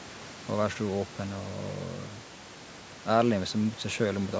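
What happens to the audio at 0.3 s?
Nothing goes wrong at 0.3 s: the speech passes through intact, with only the call microphone processing's usual bass trimming and the faint room noise, about 21 dB below the speech, in the background.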